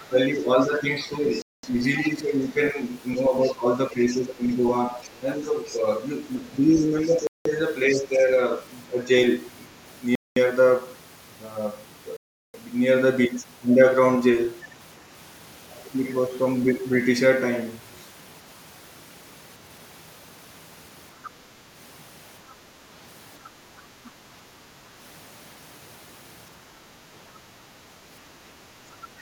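From the start to 2.09 s, a second, fainter voice sits about 20 dB under the talker. This is the other side's voice leaking through, likely a loudspeaker echo the echo canceller failed to remove. It returns at 3.45 to 3.51 s, 4.50 to 5.75 s, 6.76 to 7.99 s and 21.23 to 21.30 s at a similar level, then at 22.48 to 22.53 s and 23.45 to 24.08 s at roughly 30 dB down.

Overlapping this, from 0.09 to 9.08 s, the talker's level dips repeatedly, at worst by around 10 dB, across about three seconds in total. This is speech suppressed in double talk, likely the canceller turning down the near voice while the far side is speaking.

Bluetooth stalls cut the sound to silence at 1.42 s for 214 ms, 7.27 s for 184 ms, 10.15 s for 210 ms and 12.17 s for 374 ms. The likely cause is a headphone buffer running dry while delayed packets were resent.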